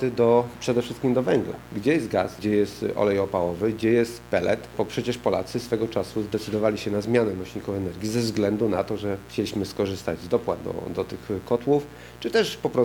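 Mains buzz runs through the whole clip, a steady, raspy drone sitting roughly 20 dB below the wanted audio. Its fundamental is 60 Hz, but the rasp comes from a dense stack of harmonics climbing into the kilohertz range, the signature of sharp switching spikes arriving twice per mains cycle. That points to interference from a dimmer or rectifier, or to an unshielded cable picking up the supply, rather than a simple hum from a ground loop.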